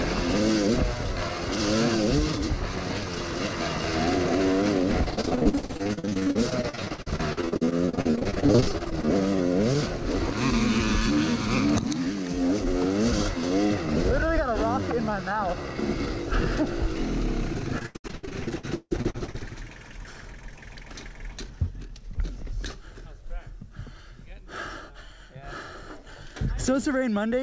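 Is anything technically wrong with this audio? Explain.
Yes. From 5.04 to 9.07 s, and again from 17.78 to 19.36 s, there is repeated packet loss with a robotic sound. Packets kept going missing, and each hole was patched by stretching the preceding sound. About 40% and 51% of those spans were filled in this way, and the longest gap was 157 ms in the second burst. The result is choppy audio with pieces missing. A spectrogram shows smeared, repeated slices, and the waveform shows copied segments, all below the call codec's 8 kHz ceiling.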